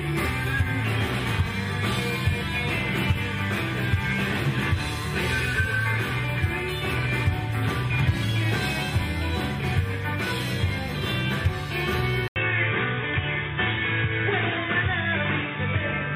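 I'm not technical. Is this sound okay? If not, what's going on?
No. At 12.28 s, after a brief 80 ms gap, the sound turns dull with nothing above 3.8 kHz, and a faint new background appears at the same loudness. That most likely means the input switched to a poorer device.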